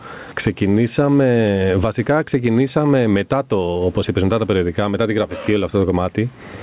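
Gain pumping throughout: the gain swings roughly 15 dB under loud syllables, likely a fast limiter fighting excess gain. Unlike a gate, it never mutes.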